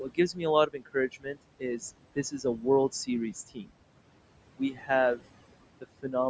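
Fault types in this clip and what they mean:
noise suppressor artifacts: The suppressor treats the steady room noise as something to remove and lowers those frequency bands frame by frame, here by about 21 dB, so the background drops away in the gaps and rises again under the speech across the whole clip.
speech cut by the noise suppressor: The suppressor mistook parts of the speech itself for noise and turned them down along with the background, by about 17 to 22 dB at the deepest, so in five stretches between 0.0 and 4.9 s some sounds come out swallowed and faint.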